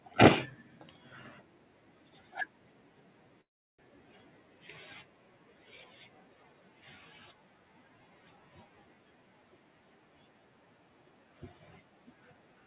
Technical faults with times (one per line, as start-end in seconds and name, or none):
3.41-3.80 long network dropout